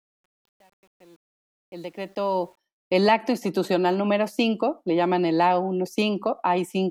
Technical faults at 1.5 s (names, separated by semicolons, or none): truncation distortion on a fade